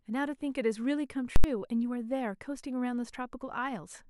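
A speech recording with invalid numbers at full scale from 1.36 to 1.44 s. A calculation produced infinite or invalid values that were clamped to the maximum level, pinning the output at full scale for that 80 ms block. The result is a loud pop at each edge with no speech between.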